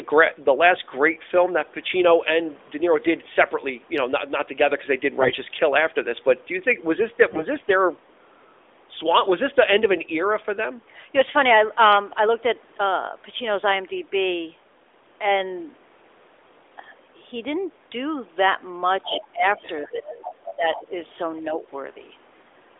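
At 5.20 to 5.41 s and again at 7.32 to 7.45 s the speech turns hoarse and gargly for a moment while keeping its pitch and loudness. These are AMR bit errors: the weakly protected bits of the mobile codec frames arrived corrupted, so the excitation pulses land in the wrong places and the fine pitch, gain and spectral values drift. The second burst is rougher because the error rate there is about twice as high. Unlike a dropout or a concealed lost frame, the sound never goes silent or repeats. It is rasped, inside the band-limited 300 Hz to 3.6 kHz sound whose light, slightly synthetic edge fits the 12.2 kbps AMR narrowband mode.

From 19.04 s the other side's voice leaking through appears as fragments at 19.04 to 19.25 s, 19.63 to 19.88 s, 20.18 to 20.54 s and 20.76 to 20.84 s. At their loudest they are about 10 dB below the talker, and elsewhere they are as low as about 25 dB down. The likely cause is an echo canceller that left part of the far-end loudspeaker signal in the microphone. 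What sets this apart from background chatter is that it is a second voice coming through in short scraps.

Over the same stretch, 19.04 to 19.58 s and 19.81 to 20.94 s, the talker's own speech dips by as much as about 20 dB in pieces. A milder dip of about 5 dB follows at 21.46 to 21.63 s. This is likely speech suppressed in double talk: with both sides talking, the canceller turns everything down. This differs from a level fade because the dips come and go in pieces.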